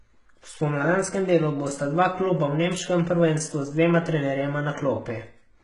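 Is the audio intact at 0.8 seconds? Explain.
No. At 0.8 s, as throughout the speech, heavy damage from what is likely HE-AAC compression, pointing to a bitrate near 12 kbps, is present: treble rebuilt from copied lower bands sounds gritty and lispy on s sounds, and a spectrogram shows blocky, repeated upper bands ending sharply at 11 kHz.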